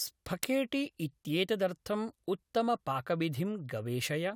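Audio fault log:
0.43 s, electrical switching spike: a sharp snap sits on top of the speech, peaking around -10 dBFS, likely a nearby switch or static arc coupling into the line.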